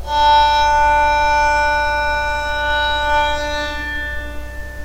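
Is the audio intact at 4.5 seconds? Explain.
Yes, the audio is intact at 4.5 seconds, with no dropout, click, distortion or other fault at that moment.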